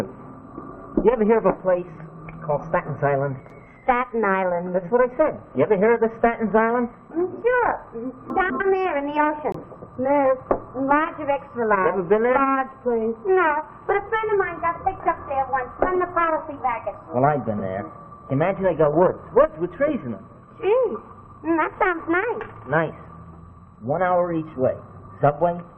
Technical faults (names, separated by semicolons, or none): chunks out of order; corrupt frame muted